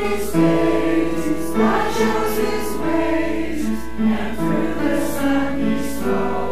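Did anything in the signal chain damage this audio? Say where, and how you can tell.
Yes. Channel delay (doubling) throughout, from the buffer stage: one channel lags 46.4 ms, which fits a 2048-sample buffer. Summed to mono, every waveform onset appears twice.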